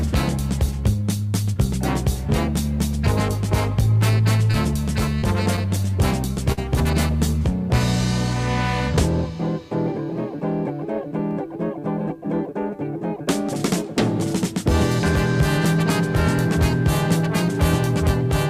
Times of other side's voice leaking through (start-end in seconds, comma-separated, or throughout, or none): none